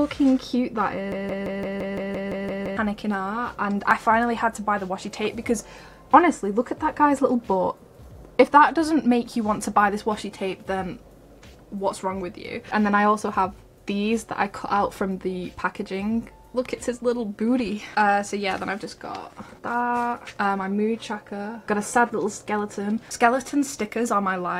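From 1.12 to 2.77 s, a broken-record loop repeats one 0.17 s fragment ten times. A stalled player or stream likely caused it, losing the audio underneath.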